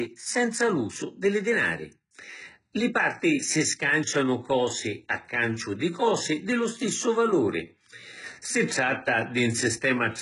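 From start to finish the speech has a bright but artificial top end: s sounds come out gritty and lispy, and the treble carries a metallic sheen that doesn't match the lower voice. Nothing is present above about 11.1 kHz. This is likely HE-AAC compression at a very low rate, which fits a bitrate near 12 kbps. The lower spectrum is coded directly, and the upper bands are copied up from it and shaped only roughly, so the rebuilt harmonics miss.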